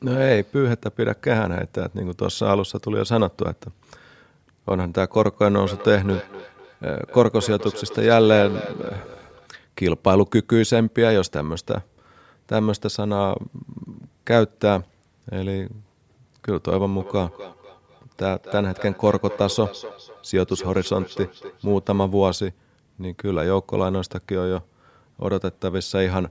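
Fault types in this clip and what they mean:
Feedback echo between two devices: words come back roughly every third of a second, thinner and ringing, up to about 13 dB below the speech, as a second device replays them into the microphone.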